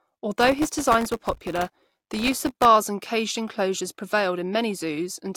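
From 0.41 s to 2.65 s, processor overload crackle tears through the speech, stopping just before "and caged enclosures". The processor could not fill its audio buffers on time, and it missed deadline after deadline. Each missed buffer left a silent hole about 0.7 ms long. Hundreds of these hard-edged dropouts pile up. Together they sound like gritty, dense crackle riding on the speech. It ends once the load eases.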